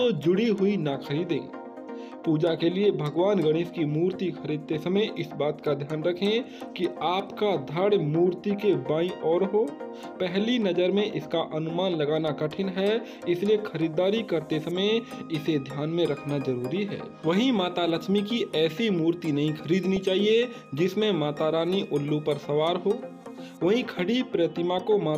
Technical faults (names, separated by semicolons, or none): DAB burbling